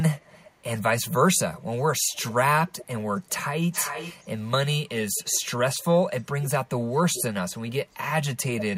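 A speech clip with echo leak in three stretches: 0.21 to 4.29 s, 5.11 to 5.4 s, and 6.93 to 7.96 s. A delayed copy of the speech returns about 400 ms late, around 10 dB below the direct signal in the first stretch, roughly 25 dB down in the brief second, and about 15 dB down in the third. The likely cause is a far-end loudspeaker whose echo canceller let some of its own playback through. Unlike room reverberation, which smears smoothly into a decaying tail, this is a distinct, late repeat.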